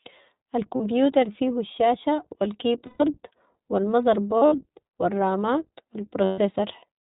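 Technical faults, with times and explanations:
Throughout, iLBC codec: the speech has been squeezed through a narrowband VoIP codec running at what sounds like about 15 kbps on 20 ms frames, each frame's excitation coded on its own. Everything above 4 kHz is gone, so sibilants lose their hiss and the voice sounds boxed in, and the coarse excitation coding leaves a plainly audible roughness and a slightly synthetic, buzzy edge on the voiced sounds.
0.76–0.81 s, lost iLBC frames: about 40 ms of packets went missing, and the decoder filled the gap by repeating the last pitch cycle blended with noise, so it is heard as a brief held, faintly buzzy vowel just before "فيهو الشاشة".
2.86–3.03 s, lost iLBC frames: a longer loss of 140 ms, where the repeated pitch cycle is stretched further and fades as the concealment runs on. The result is a drawn-out, breathy vowel, and clean speech returns almost at once because the next frame decodes on its own.
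4.38–4.59 s, lost iLBC frames: 120 ms of losses scattered over 200 ms, the longest run roughly 70 ms, so short concealed buzzy stretches alternate with real speech, giving a stuttering quality just before "و الرامات و".
6.24–6.40 s, lost iLBC frames: 140 ms lost right after "و الرامات و", concealed by a held pitch cycle that thins into breathy noise as it fades.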